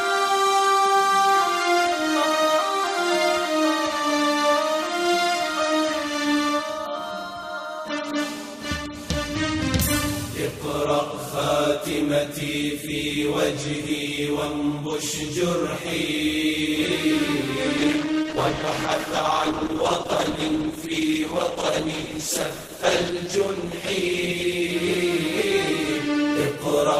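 At 17.83 s a call bitrate drop kicks in. The sound turns coarse, watery and muffled through to the end, which fits the encoder falling from about 48 to 11 kbps.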